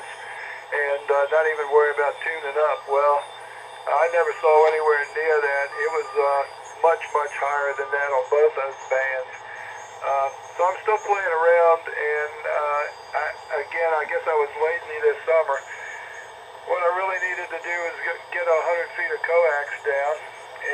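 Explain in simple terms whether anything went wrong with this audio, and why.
Between 7.54 and 9.57 s, one channel ran a tiny fraction of a millisecond behind the other, and the two were merged into one. This channel delay causes comb filtering: the highest tones, from around 10 kHz, cancel out, so the sound turns dull.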